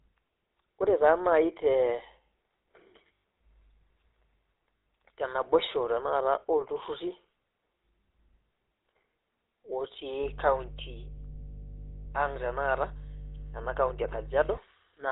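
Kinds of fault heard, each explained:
GSM full-rate codec: The speech runs through a pulse-excited vocal-tract model, probably at 13 kbps, leaving a buzzy, gravelly roughness and nothing above 4 kHz throughout.
Lost GSM frames: Missing frames are patched by repeating the last good one, so the sound rings rough and metallic near 3.1, 4.8 and 12.0 s.
Mains hum: A steady 50 Hz tone with low harmonics comes from power-line coupling, about 15 dB below the speech, from 10.2 to 14.6 s.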